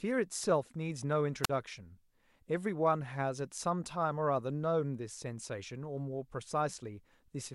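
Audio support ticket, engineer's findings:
Wireless microphone squelch dropout, 1.43–1.50 s. Analogue FM link: RF fades, receiver squelch closes. Brief hiss rise, then about 44 ms of near silence in the speech, voice returning afterwards. Check receiver antenna placement, transmitter battery, line of sight.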